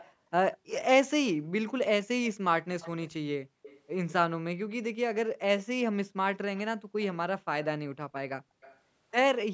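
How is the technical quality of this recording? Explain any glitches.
The speech carries a recurring echo leak, in five short bursts: 0.00–0.13 s, 0.54–0.79 s, 2.80–3.13 s, 3.62–3.81 s and 8.61–8.79 s. The likely cause is an echo canceller on a loudspeaker end that failed to scrub its own playback from the microphone, so that sound was sent back. Each burst is a faint copy trailing the speech by about 200 ms, roughly 20 to 25 dB down, in a band that stops at 8 kHz as the call processing allows.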